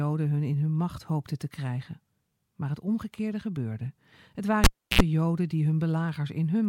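At 4.64 s the cable is pulled and plugged in again. A pop cuts the speech, leaving near silence for about 0.32 s. Then comes a 74 ms burst of 60 Hz mains buzz as only the tip touches. A second pop marks the sound's return at 5.01 s.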